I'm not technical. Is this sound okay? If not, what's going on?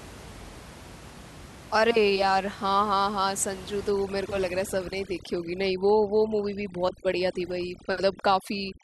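No. From about 3.91 seconds to the end at 8.83 seconds, the clip suffers from overdone noise removal. A cleanup tool was set too strong, so it shuts off any slice of sound it mistakes for background hiss, and the quieter parts of the voice get cut along with it. In the pauses the background drops and breaks up into twinkling specks. Before that, the room noise is left as recorded; here the background is pulled unnaturally away.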